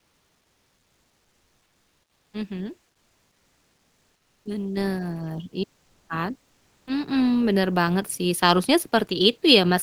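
From 2.91 to 4.45 s, the pause between phrases loses its natural room detail and becomes a flat, featureless hiss, about 2 dB quieter than the real background, which sits about 48 dB below the loudest speech. This is comfort noise in place of the background, likely from discontinuous transmission: the sender stopped sending during the 1.5 s of silence, and the receiver filled it with synthetic noise.

Right where that fill ends, at 4.43 to 4.45 s, speech resumes abruptly, with its soft beginning missing for about 20 ms. This is an onset clipped by the voice detector: the sender's detector was likely slow to notice the sound returning, so the first instant was never sent and comfort noise covered it.

At 4.77 s, speech and background together jump up by about 7 dB in a single step, and at 7.05 s they rise again by about 4 dB. Both are the microphone volume stepped up: the call software judged the input too quiet and raised the device gain abruptly, in the middle of the audio.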